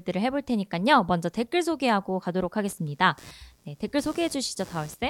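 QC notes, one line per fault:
2.68 to 5.10 s, computer activity noise: a change in processor, graphics or mouse load shifts the ground that the audio circuit shares with the computer, and that disturbance rides into the signal path. It comes in as a buzzing, chirping layer with a pulse rate of around 100 a second, sitting roughly 25 dB below the speech. It persists to the end of the clip and follows the machine's activity rather than anything in the speech.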